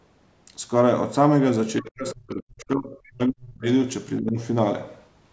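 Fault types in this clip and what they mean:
Speech suppressed in double talk, 1.8 to 3.66 s and 4.2 to 4.38 s: the speech sinks and breaks up through most of the first span, almost vanishing at its deepest, then dips more mildly in the brief second, likely an echo canceller muting the talker during overlapping talk.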